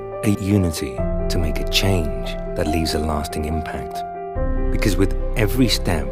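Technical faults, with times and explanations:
No technical faults are audible anywhere in the clip.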